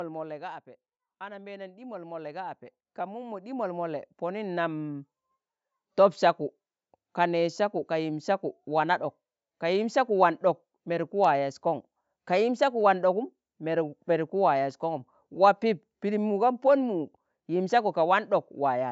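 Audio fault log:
1.19–5.15 s: automatic gain rising. The level climbs by about 16 dB over four seconds. Voice and background noise swell together. That shared, gradual rise comes from the gain control judging the input too quiet and slowly turning it up.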